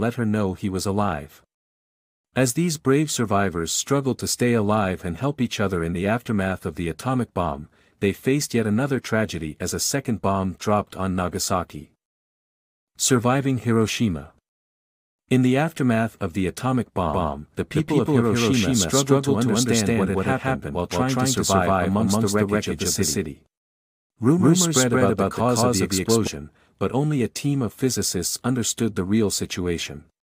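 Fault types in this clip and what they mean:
Doubled audio track: from 17.13 to 26.27 s a second, equally loud full-band copy trails the sound by about a fifth of a second, likely from a slow second capture path; the waveform and spectrogram show every onset repeated, with abrupt start and stop.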